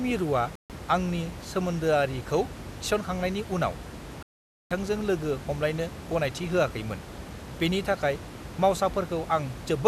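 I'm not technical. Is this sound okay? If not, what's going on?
No. There are two digital broadcast dropouts, from 0.55 to 0.70 s and from 4.23 to 4.71 s. The receiver lost clean data and muted, so the speech briefly cuts to silence, and whatever was said during those gaps is gone.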